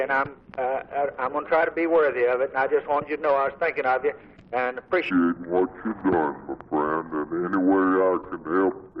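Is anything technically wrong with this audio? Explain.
Yes. From 5.11 s to the end, a section at the wrong speed plays at 0.648 times normal, likely from fitting to a mismatched clock. Everything sinks about seven semitones and drags. Unlike a pitch-shift fault, where timing holds, pitch and pace drop together here.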